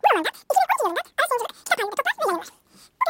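The whole clip has a wrong sample rate: speech fits 16 kHz audio played at 44.1 kHz, so it's 2.76 times too fast and 17.6 semitones too high.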